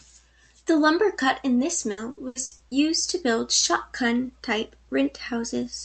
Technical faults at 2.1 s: repeated packet loss (robotic sound)

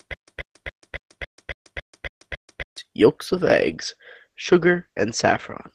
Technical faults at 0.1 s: stutter with silent gaps

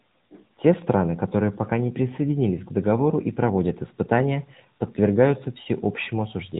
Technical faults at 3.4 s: AMR narrowband mobile codec

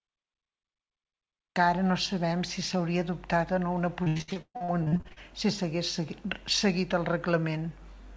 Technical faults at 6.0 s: none

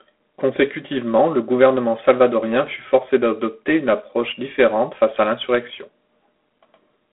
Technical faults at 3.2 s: G.726 ADPCM

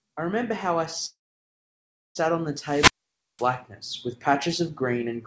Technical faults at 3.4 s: wireless microphone squelch dropout

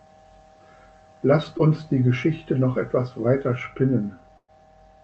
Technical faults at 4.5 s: burst of packet loss

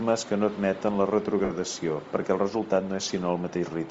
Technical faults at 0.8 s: Bluetooth LC3 compression

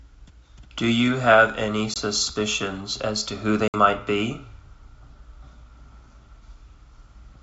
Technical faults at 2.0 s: packet loss on an ADPCM call

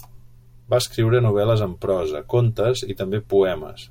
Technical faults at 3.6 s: none

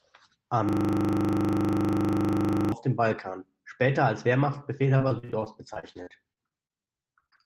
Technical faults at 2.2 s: system hang loop

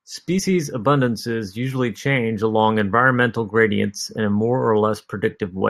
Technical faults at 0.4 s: damaged data in a compressed stream

